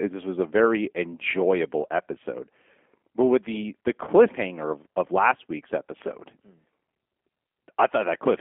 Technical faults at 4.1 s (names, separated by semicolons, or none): G.729 codec; VoIP packet loss concealed by the speech codec